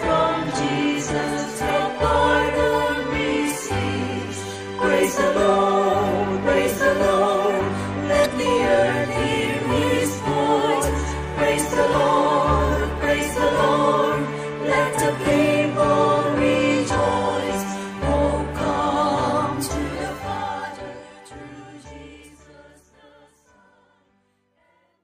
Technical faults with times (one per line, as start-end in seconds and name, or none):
1.66-1.71 damaged data in a compressed stream
8.22-8.26 damaged data in a compressed stream